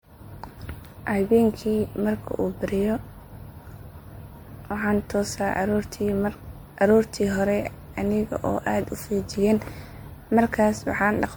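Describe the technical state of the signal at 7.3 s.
At 7.3 s the speech carries generation loss, present throughout the clip. It is likely from repeated MP3 re-encoding, around seven passes, each re-quantising on a shifted frame grid. Unlike a single 96 kbit/s encode, it sounds swirly, hollow and smeared, with blurred attacks, while the bandwidth still reaches about 20.1 kHz.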